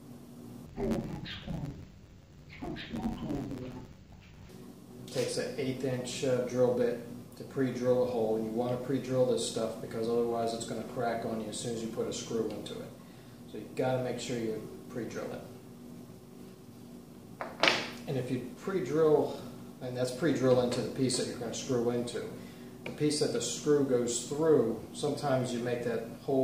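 From 0.66 to 4.50 s, interleaved audio read as planar: each 10.88 ms block is split wrongly between channels, leaving the sound dull and robotic with a 91.9 Hz buzz.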